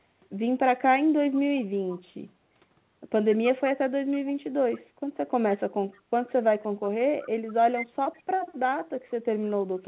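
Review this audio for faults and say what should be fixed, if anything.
Echo leak appears at 5.93–6.01 s, 7.22–7.30 s and 8.05–8.22 s as a brief copy of the speech trailing it by 159 ms. It is very faint in the first and last instances and somewhat stronger at 7.22 s. The likely cause is a far-end loudspeaker whose echo canceller let residual pickup return. On a spectrogram it shows as faint duplicate formant traces offset 159 ms later, capped at 4 kHz like the surrounding audio. On the waveform it appears as small trailing ripples. Better echo cancellation or a headset at the far end would prevent it.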